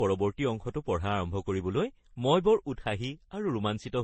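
Throughout, the speech sounds dull with nothing above 8.5 kHz, and several layers of smeary, warbly artefacts pile up together, likely from transcoding between lossy codecs at low bitrates.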